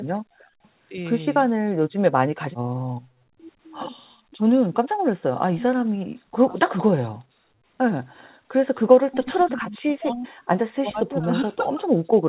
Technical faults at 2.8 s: background gated by the echo canceller

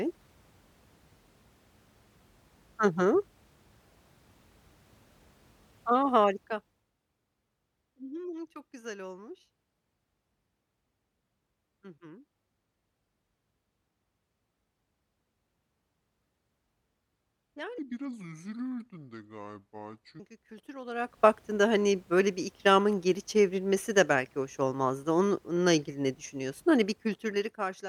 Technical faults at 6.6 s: zipper noise

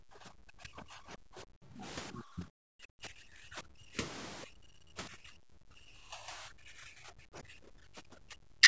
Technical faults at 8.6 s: speech suppressed in double talk

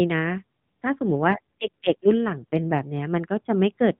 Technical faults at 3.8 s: none

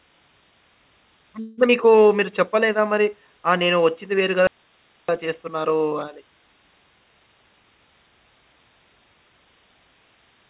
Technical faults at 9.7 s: none

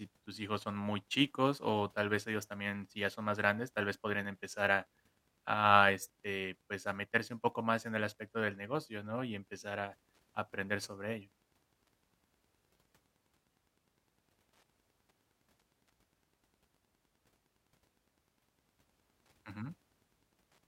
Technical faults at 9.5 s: Wi-Fi interference

